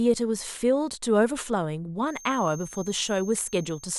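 From 2.0 s to the end of the speech, a feedback whistle sits at 6.4 kHz, roughly 20 dB under the voice. Unlike runaway howl, it swells and fades slowly but never builds; it likely comes from a loudspeaker-to-microphone loop balanced just at the edge of feedback.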